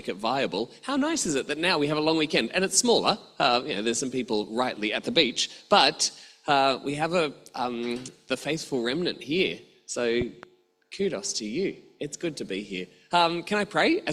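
A sudden voltage pulse, likely from a plug, switch or static discharge, entered the signal chain, causing a loud pop: two sharp thumps from 10.21 to 10.46 s, peaking about 10 dB above the surrounding audio, which continues underneath.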